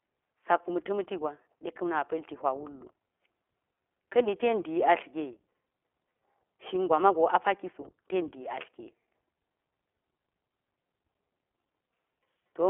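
From start to finish the speech carries iLBC codec damage. The codec treats each short frame on its own, consistent with 20 ms frames at the 15.2 kbps mode, so the excitation is rebuilt without continuity and voicing turns plainly rough and synthetic. The band is telephone-narrow, roughly 300 Hz to 3.4 kHz, with nothing above 3.8 kHz, which strips sibilance and air and leaves a boxy, muffled tone.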